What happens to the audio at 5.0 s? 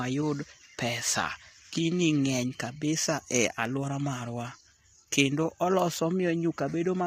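At 5.0 s, as across the whole clip, the speech was likely squeezed through low-delay AAC compression at a low bitrate, in keeping with about 24 kbps. Its short frames blur the pitch harmonics, so the voice sounds rough and grainy, with noise between harmonics and a dulled, synthetic top band.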